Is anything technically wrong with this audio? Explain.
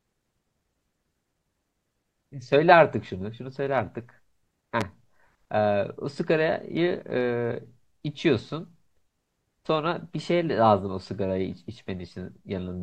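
Yes. There is one loud pop, from 4.81 to 4.84 s. A single sharp transient lands on top of the speech. Its peak sits roughly 15 dB above the surrounding signal. The speech carries on underneath without a break. The likely cause is a sudden voltage step or pulse, from a plug, a switch, static discharge or a driver glitch, entering the signal path. The following circuitry shapes that pulse into a brief, hard click-thump.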